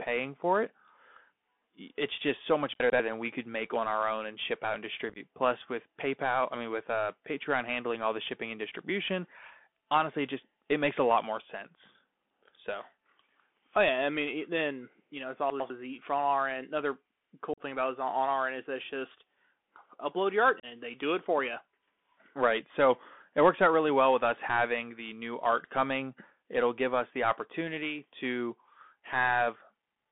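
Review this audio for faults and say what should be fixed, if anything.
Bluetooth CVSD headset codec, throughout: the speech is confined to a telephone band of about 200 Hz to 3.5 kHz, and the one-bit up-or-down coding, consistent with a 64 kbps link, leaves granular hiss and scratchy s sounds. Switching to a wideband or wired connection would prevent this.

Chunks out of order, 2.8 to 3.0 s and 15.5 to 15.7 s (after "then you know it's"): a 100 ms chunk plays one slot late, swapping places with its neighbour, so the speech jumbles briefly. Writing buffers strictly in sequence would prevent it.

Unconcealed Bluetooth headset packet loss at 5.09 to 5.18 s (after "and ship out and"), 17.54 to 17.62 s, and 20.60 to 20.65 s (between "upload your art" and "they do it for"): 30 to 41 ms of audio drops out each time as abrupt holes, giving a chopped, crackly sound. A stronger radio link with packet loss concealment would prevent it.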